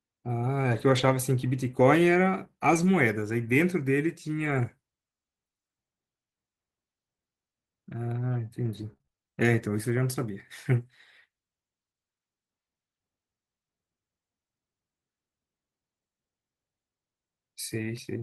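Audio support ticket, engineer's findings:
Lost packet rebuilt from error correction at 0.73–1.15 s, 2.73–2.87 s, 3.53–3.55 s and 4.37–4.59 s. No gaps, but those stretches turn rougher and grainier. Probable component: network path, with the Opus decoder covering losses. Each lost packet was replaced by the low-bitrate backup copy carried in the next packet. About 220, 80, 20 and 120 ms are rebuilt, which fits 20 ms frames.

Repeated packet loss (robotic sound) from 8.65 to 10.26 s. Choppy texture with small pieces missing. Eight short holes, the longest 25 ms. Roughly a tenth of a second and a half of sound is patched, about 8% of the span. Probable component: network jitter or loss upstream of the decoder. Each hole is filled by extending the previous sound, and the next loss arrives before the sound settles.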